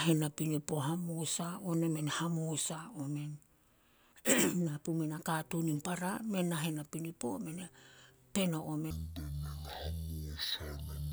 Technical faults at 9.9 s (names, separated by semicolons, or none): stereo read as mono